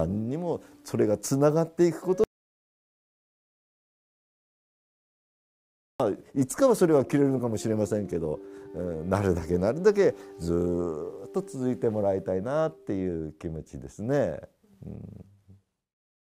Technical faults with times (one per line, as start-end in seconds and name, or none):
2.24-6.00 audio dropout to silence